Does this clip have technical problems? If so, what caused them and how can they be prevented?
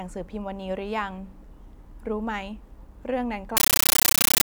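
Yes. A compressed stream played as audio runs from 3.57 s to the end at 4.45 s: the speech gives way to very loud, chattering static. An AC-3 (Dolby Digital) bitstream, its density pointing to a high-rate 640 kbps stream, was passed to the output as ordinary samples and never decoded. Each frame arrives as a 13.3 ms burst of noise followed by zero padding, repeating at 31.25 per second, which creates the rapid chatter. To prevent it, set the S/PDIF or HDMI output to decode to PCM or confirm the receiver handles the bitstream, and never route encoded data into a PCM path.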